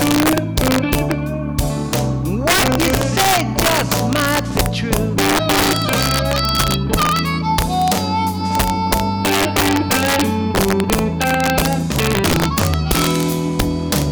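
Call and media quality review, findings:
Integer overflow, throughout the clip. Loudest peaks crack violently instead of flattening. Probable component: fixed-point gain or mix stage driven about 6 dB past full scale with no saturation. Over-limit samples wrap to the opposite sign, each a full-range jump; around one percent of samples affected. Distinct from clipping: harsh snaps rather than a flat-topped buzz.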